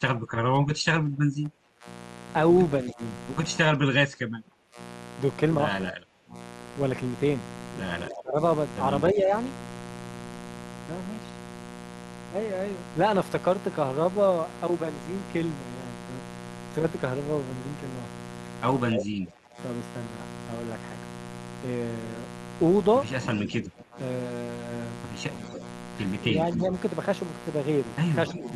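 A mains buzz runs under the whole recording, sitting about 15 dB below the speech. It is built on 60 Hz, but sharp switching spikes twice per mains cycle push harmonics well into the kilohertz range, so it sounds raspy rather than like a smooth low hum. That upper-harmonic edge marks it as buzz from a dimmer, rectifier or poor shielding, not a clean ground-loop tone.

From the start to 9.3 s the speech repeatedly dips, thins and breaks off, totalling around four seconds, with the deepest drops near 25 dB. This is likely speech suppressed in double talk: with both sides active, the echo canceller could not separate this talker from the returning loudspeaker signal and attenuated everything. Unlike a network dropout, the level ducks and the high end fades rather than the audio stopping dead. The same ducking returns from 18.93 to 19.58 s, down about 20 dB, and again from 23.42 to 28.48 s, about 15 dB deep.

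Brief scraps of echo leak appear at 2.87 s and 8.08 s, then a louder one at 18.96 s, only about 5 dB under the speech. From 23.23 s to the end, a sustained copy trails about 15 dB down. Each is a discrete repeat delayed by roughly 280 ms, which separates it from room reverberation. The likely source is a far-end loudspeaker whose canceller let part of its microphone pickup through.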